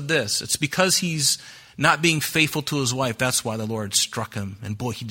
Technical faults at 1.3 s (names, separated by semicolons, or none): clock slip clicks